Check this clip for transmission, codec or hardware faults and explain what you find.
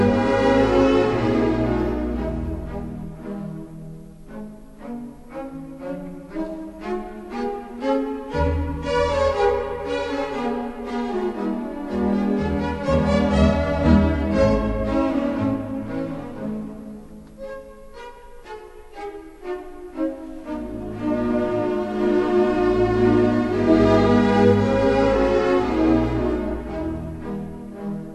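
A wrong sample rate fault runs through the whole clip. The audio plays at 0.726 times its proper speed and about 5.55 semitones low, which fits material captured at 44.1 kHz being clocked out at 32 kHz with no conversion. Tempo and pitch drop together by that same ratio, so everything sounds slowed and deepened. A pitch-shift or time-stretch error would instead change only one of the two.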